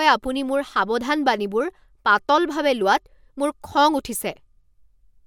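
No technical faults can be heard in this recording.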